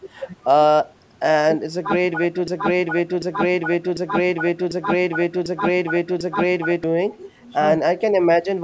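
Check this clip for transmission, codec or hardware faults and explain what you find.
A broken-record loop runs from 2.48 to 6.84 s. A 0.75 s fragment of speech repeats six times back to back, likely because the stream stalled and kept resending its last fragment. The repeats are identical rather than fading like an echo, and the speech from that span is lost.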